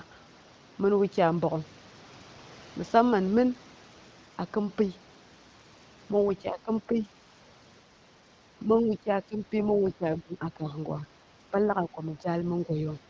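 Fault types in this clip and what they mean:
Speech suppressed in double talk, 6.42 to 7.08 s, 8.64 to 11.05 s and 11.5 to 12.27 s: the speech dips for part of each stretch. It drops by roughly 10 dB in the first and last stretches and by about 15 dB in the middle one, where close to a second in total is pulled down. The likely cause is an echo canceller that hears both ends talking at once, cannot separate the near talker from loudspeaker echo, and attenuates both.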